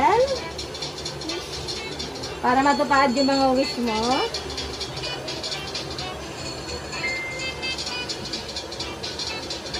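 No technical faults are audible.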